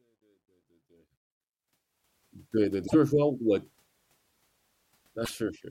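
From 0.0 to 2.12 s the fade-in of the speech shows truncation distortion. The gain ramp itself is smooth, but the fade was computed at about 12-bit resolution with no dither. Between 0.0 and 0.83 s the quiet signal collapses into coarse steps and sounds gritty.

Two short disruptions, at 2.86 to 2.94 s and 5.24 to 5.30 s, are likely a broken MP3 bit reservoir. Each is a brief jump with a garbled burst or gap of a few tens of milliseconds, matching a few 26.1 ms frames decoding against the wrong data.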